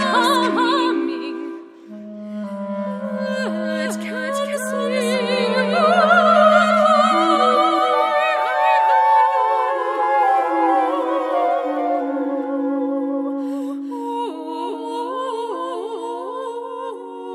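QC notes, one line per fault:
Throughout: doubled audio track. A second full-band copy of the sound trails the original by roughly 0.4 s at about 5 dB lower, likely from a second capture path or misaligned edit; unlike echo or reverb, it repeats once, with no decay or room colour.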